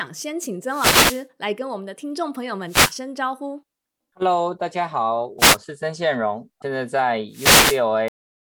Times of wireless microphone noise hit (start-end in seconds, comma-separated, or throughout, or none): 0.67-1.25, 2.67-2.95, 5.38-5.57, 7.31-7.82